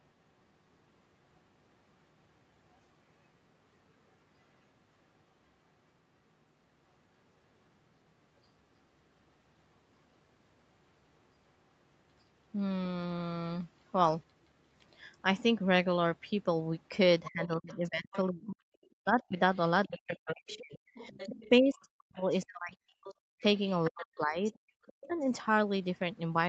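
From 17.25 to 18.17 s you can hear a second talker faintly underneath, about 20 dB below the main speech. That's the other side's voice leaking through, likely because the far end's loudspeaker output got back into the microphone and the echo canceller didn't fully remove it. It comes back for a longer stretch from 18.83 to 23.15 s, and again from 23.69 to 25.07 s, each time sitting low behind the speech.

Overlapping that, from 17.28 to 22.74 s the main speech keeps dipping and dropping out in pieces, adding up to roughly three seconds, with the deepest drops around 40 dB. That's speech suppressed in double talk, likely because the canceller couldn't separate the local talker from the echo while both were active and turned everything down. It happens again from 23.33 to 25.14 s, about a second in total, so the speech sounds chopped right where the leak is playing.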